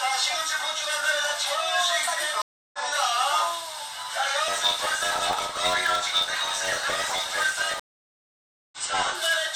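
An everyday sound recording in which the stream connection dropped twice and a fresh decoder restarted mid-stream. Each stream reconnect is heard as silence followed by a jump ahead: at 2.42 to 2.79 s there is a 315 ms gap and the sound resumes roughly a fifth of a second later, and at 7.80 to 8.78 s a 926 ms gap skips ahead by about 0.7 s. From 4.47 to 9.15 s, a block size mismatch (truncated), consistent with one stage writing 512-sample blocks that the next stage cuts short, discards each block's tail. This produces a 91.9 Hz buzz and makes the sound run 1.07 times fast at about its normal pitch.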